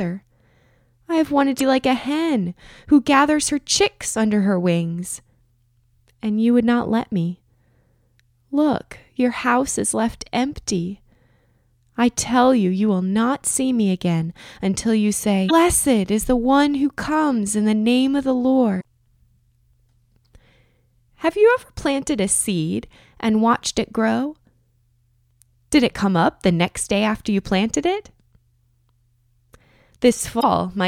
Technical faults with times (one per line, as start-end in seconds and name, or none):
1.56-1.61 damaged data in a compressed stream
15.45-15.51 damaged data in a compressed stream
18.77-18.84 damaged data in a compressed stream
30.37-30.44 damaged data in a compressed stream